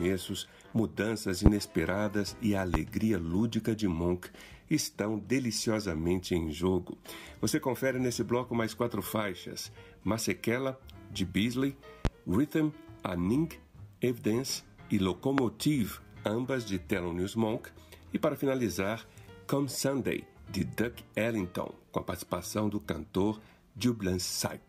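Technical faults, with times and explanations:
1.46–1.49 s, 2.74–2.77 s, 12.05–12.08 s and 15.38–15.41 s, loud pop: four single pops, each about 30 ms long, jump roughly 20 to 25 dB above the surrounding sound, which carries on unbroken beneath them. Each is a sharp thump, most likely a voltage pulse from a plug, switch or static discharge shaped by the circuits after it. Because nothing is lost underneath, this is added energy rather than a dropout or an edit-point click.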